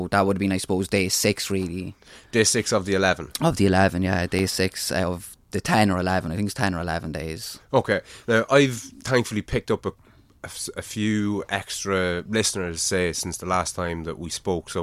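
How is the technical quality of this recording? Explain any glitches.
The speech carries one glitch, a block of digital silence at about 4.39 s. For roughly 0.67 ms the sound drops out and returns with no fade. That fits a 32-sample buffer left unfilled in time. The abrupt edges produce a single brief tick.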